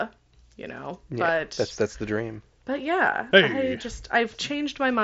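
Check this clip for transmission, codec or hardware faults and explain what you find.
No transmission, codec or hardware faults turn up in this speech recording. The Bluetooth mSBC headset link carries the speech up to 8 kHz, with a light grainy texture on the louder passages and the weaker upper bands flickering in and out.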